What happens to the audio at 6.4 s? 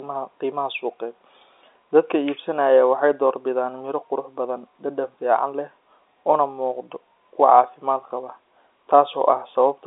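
Nothing goes wrong at 6.4 s: the speech runs on intact through that moment, carried in the ordinary narrow telephone band of G.711 coding with nothing above about 3.8 kHz.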